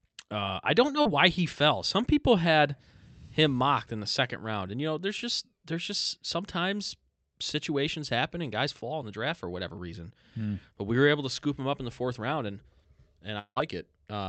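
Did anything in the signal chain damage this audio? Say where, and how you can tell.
Yes. Network stage first: just after "uh I don't know", at 1.01 to 1.07 s, a short concealed packet loss leaves a quick smear before "he fell". About 40 ms never arrived in time, so the decoder stretched the last sound to cover it and then blended back.

Near the end, 13.39 to 13.58 s, the sound turns into a fading buzz or hiss that drops to near silence for about 80 ms before audio resumes, with a piece missing. That's likely a long network dropout: roughly 180 ms lost, mostly patched by concealment.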